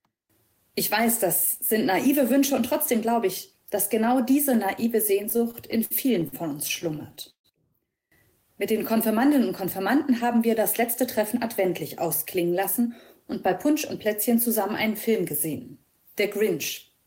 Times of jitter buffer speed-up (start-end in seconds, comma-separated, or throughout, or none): 10.39-12.91